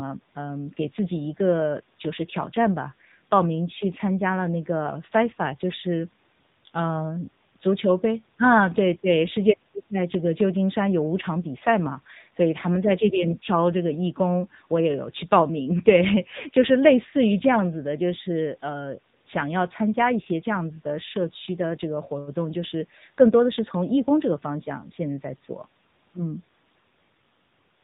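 From start to finish the speech passes through an AMR narrowband mobile codec, and the damage is plainly audible. Everything above 4 kHz is gone, so on a spectrogram the energy stops at a flat ceiling with empty space above it. The voice sounds buzzy and synthetic because the codec rebuilds it from a vocal-tract model driven by sparse pulses. The strong coarseness points to one of the middle AMR-NB modes, near 8 kbps.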